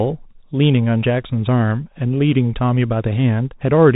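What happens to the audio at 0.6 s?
At 0.6 s, as across the whole clip, the speech is carried through a Bluetooth CVSD headset codec, which encodes each sample as a single up-or-down step with an adapting step size. Nothing above 3.8 kHz survives, loud bright sounds outrun the step and distort, s sounds turn scratchy, and a granular hiss sits underneath.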